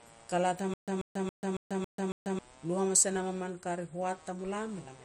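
Right from the start there's computer activity noise running under the speech: a faint buzzy, chirpy texture pulsing at somewhere around 150 Hz, sitting roughly 30 dB below the speech. It doesn't follow the speech at all. It rises and falls with whatever the machine is doing, because processor, graphics or mouse load is pushing current around the shared ground and the audio circuit picks up that movement as scratchy interference.

Then from 0.74 s to 2.39 s there's a stutter with silent gaps. The same 137 ms burst plays six times, each followed by about 140 ms of dead digital silence, so it repeats on a steady 277 ms cycle. It's likely the player or stream stalling, replaying the last fragment on each retry and then running dry. Whatever should have played in that stretch is gone, and normal playback resumes with "lui hamas e nam".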